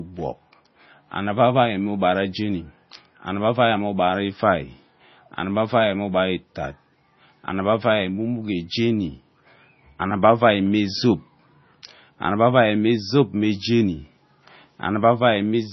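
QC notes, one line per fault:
Throughout, MP3 compression: nothing above 5.9 kHz, and the speech has a heavy watery, swirling texture as weak frequency lines drop in and out between frames, likely from an encoder starved of bits, which fits about 24 kbps. That swirl sets it apart from a plain low-pass filter.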